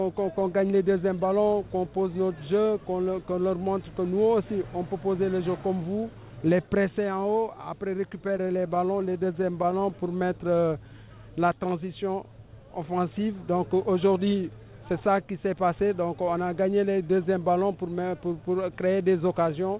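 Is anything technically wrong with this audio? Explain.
Yes, there are three timing problems, all from the receiving side of a call. The audio has nothing above 4 kHz, which fits a G.711 mu-law path at 64 kbps.

From 8.1 to 10.5 s there's a run of repeated stalls, a stutter. Packets kept showing up late, so the jitter buffer kept running dry, and each time the receiver stretched the last bit of sound to cover the hole. There are a couple of dozen tiny gaps, the longest about 12 ms, adding up to roughly 250 ms of filled-in audio. None of the content is lost, but it catches and drags.

Straight after that, from 10.54 to 11.6 s, you get a jitter buffer slow-down. The buffer was low, so the receiver rebuilt its reserve by repeating single pitch periods and slivers of pauses over and over. That added 137 ms, and playback runs at about 88% speed. The pitch doesn't change, so it just sounds drawn out, with sounds lingering a little longer than they should.

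Then from 13.57 to 15.15 s there's the opposite, a jitter buffer speed-up. By this point the buffer was holding more audio than it wanted, so the receiver trimmed short pieces of a pitch period or so many times in a row. That cut around 150 ms and pushes playback to about 109% speed. Again the pitch holds steady, but that stretch sounds hurried and slightly clipped in its pacing.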